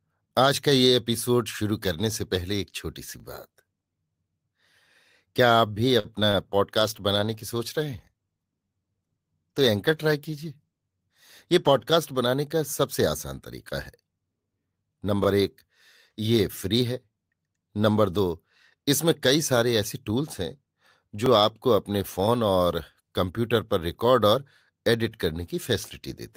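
At 3.20 to 3.22 s there is a small stutter, the first of the overlapping chunks. The audio was handled in blocks of about 6 s, and each block began slightly before the previous one ended, so about 21 ms at the join plays twice. The doubling gives a click or hiccup rather than a gap. Its fixed spacing is what separates it from network faults, which arrive irregularly.

From 6.00 to 6.06 s there is a short stall from a late packet. A packet arrived late, the jitter buffer ran dry, and the receiver held the last sound for 48 ms until the data came in. Playback then resumed where it had stopped, adding 48 ms of delay. Nothing is lost. The sound is stretched with a slight buzz or dip, which distinguishes it from a dropout.

Two short concealed packet losses follow, at 6.20 to 6.23 s and 6.31 to 6.35 s. Each time, 20 ms of audio never reached the decoder. The receiver extended the preceding sound to fill the hole, using 10 ms of fill in the first and 19 ms in the second, then blended back into the real audio. 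Unlike the stall, material is actually missing. The result is a quick smear or wobble, and a brief consonant may drop out.

From 6.78 to 11.99 s a call bitrate drop takes the encoder from 32 to 18 kbps, staying at the lower rate for about 5.1 s. Coarser coding makes the sound rough and watery, with the top end dulled. This is a sustained change in tone, where packet faults are momentary.

The overlapping-chunk stutter recurs on the same 6 s cycle at 9.22 to 9.24 s (inside the low-bitrate stretch), 15.24 to 15.26 s and 21.26 to 21.28 s.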